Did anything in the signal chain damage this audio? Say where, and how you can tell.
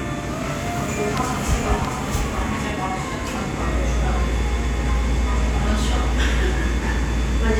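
Yes. A second capture path, likely a slower route through the driver or buffer stage, mixed the sound in twice from 0.67 to 2.71 s. This doubled audio track trails by roughly 0.7 s, about 5 dB quieter, with no decay, and starts and stops abruptly.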